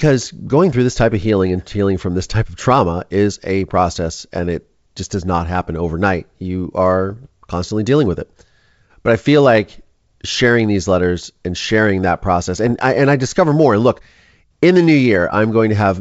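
Speech that twice breaks into rough, crackling bursts with pops and brief jumps in level, from 7.10 to 7.27 s and again from 12.67 to 12.76 s. These are bit errors on an ADPCM link, at a rate of roughly a third of a percent. On a G.722 wideband path, which elsewhere carries the speech cleanly, each flipped bit throws off the decoder's step size and prediction, so the damage rings on for milliseconds rather than clicking once.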